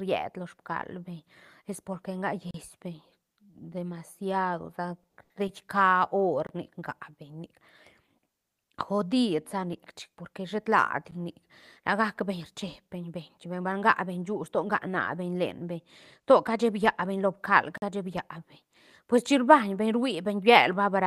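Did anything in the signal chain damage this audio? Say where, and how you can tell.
Yes. In the driver or buffer stage, blocks of digital silence cut in at 2.51 s, 6.47 to 6.49 s, 11.11 s and 17.78 to 17.82 s. Each cuts to silence and back with no fade. The lengths fit 512-, 1024- and 2048-sample buffers left unfilled, not lost packets, which would be concealed.

On the network side, repeated stalls (stutter) appear from 5.03 to 5.52 s. The receiver's jitter buffer ran dry in four short waits, the longest 70 ms, and each was filled by stretching the last sound. About a third of that span is padding and nothing is missing, so the speech drags rather than breaking into holes.

A jitter buffer speed-up runs from 17.52 to 18.11 s. The speech plays at about 107% speed while its pitch stays the same, because short pitch-period pieces totalling about 40 ms were trimmed to cut excess delay. A wrong sample rate would raise the pitch as well.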